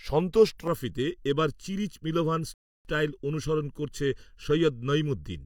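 From 0.67 s to the end, the speech has channel delay with comb filtering. One channel runs late by under a millisecond, and the mono sum cancels evenly spaced frequencies. The first notch sits near 700 Hz. The sound turns hollow and phasey.

At 2.54 s there is a rebuffering stall. The player ran out of audio and waited. Silence lasts until 2.85 s, adding about 311 ms. The speech then resumes exactly where it stopped. Nothing is lost.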